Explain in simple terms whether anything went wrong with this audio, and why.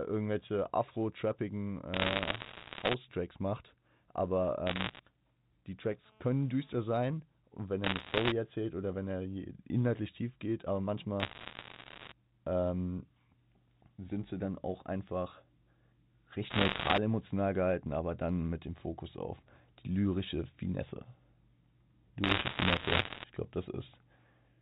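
Bit errors on a digital phone line cause crackle and sharp ticks over the speech at 1.94–2.94, 4.67–5.0, 7.84–8.32, 11.2–12.12 (after "inhaltlich tief geht aber"), 16.5–16.98 (before "emotional gehalten aber dann") and 22.24–23.24 s (before "ich glaube"). Flipped bits corrupt individual samples.

GSM phone buzz, a steady raspy hum at 217 Hz, sounds from 6.06 to 6.98 s. A nearby mobile phone on a call was sending radio bursts that the audio circuitry picked up.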